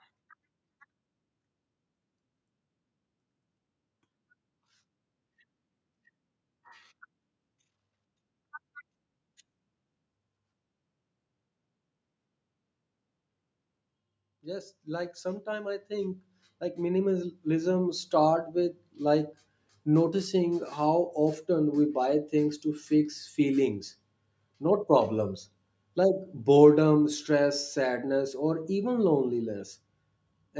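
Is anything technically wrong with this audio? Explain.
Yes. From 14.41 s to 19.03 s there is automatic gain rising: the gain control judged the input too quiet and turned itself up by about 14 dB over those few seconds, so the speech and the background noise swell louder together rather than the level holding steady.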